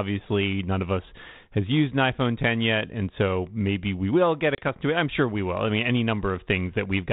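At 4.55 s, after "maybe we will get", packet loss on an ADPCM call cuts about 30 ms, a few packets, to hard-edged silence. Unlike a plain dropout, "to it I'm sure" resumes slightly distorted, settling by 4.69 s, as the 32 kbit/s G.726 decoder's predictor resynchronises.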